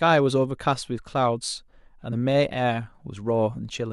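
At 2.12 s, compressed frames are skipped. Whole frames of the encoded speech never reach the output, either lost from the file or rejected by the decoder. The speech jumps ahead by roughly 70 ms.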